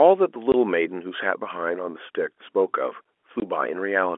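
At 0.52 to 0.54 s the speech drops out completely for 20 ms. It happens again at 3.40 to 3.42 s, also for 20 ms. This is packet loss filled with silence. Audio went missing in transit, and the receiver played nothing in its place. Each gap's length fits one lost 20 ms packet. The signal stops and restarts abruptly. Around the holes, the narrow telephone band of the G.711 line can still be heard.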